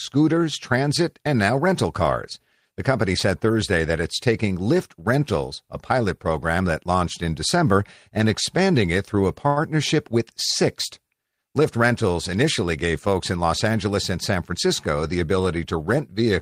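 At 9.47 s the speech briefly hangs: for about 91 ms, to 9.59 s, one sound is held longer than it should be, with a faint buzzy or dipping quality, and then the talk resumes exactly where it left off. This is a short stall from a late packet. The next packet did not arrive in time, the jitter buffer emptied, and the receiver stretched the last sound until it arrived. Nothing is lost, but the playback now runs about 91 ms later.

From 13.37 s to 14.54 s the speech sounds hurried. It runs about 7 percent faster, at 107 percent of normal speed, while the pitch stays the same. This is a jitter buffer speed-up. The buffer was holding more audio than its target, so the receiver repeatedly cut out short slices about one or a few pitch periods long. Together these slices add up to roughly a tenth of a second, which trims the extra delay.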